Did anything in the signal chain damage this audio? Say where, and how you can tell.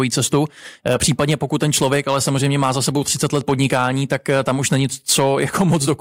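Yes. Hard clipping runs through the whole speech clip: the loudest peaks crackle with a brittle, buzzy edge. The level was driven about 5 dB past what a converter or fixed-point format stage could pass, flattening a small fraction of peaks and adding high harmonics.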